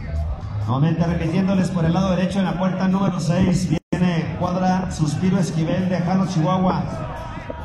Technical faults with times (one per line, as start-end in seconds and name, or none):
3.78-3.93 gap at a join of encoded pieces